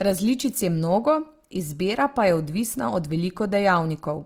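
From start to finish the speech carries a rough, grainy texture: upper harmonics sound noisy rather than clean, with little swirling. This is likely Opus compression in its music (CELT) mode, which under a tight bit budget fills starved bands with folded or noise-like content, consistent with a low rate near 24 kbps. A spectrogram would show full bandwidth reaching about 20.2 kHz, but with smeared, speckled harmonics instead of crisp lines.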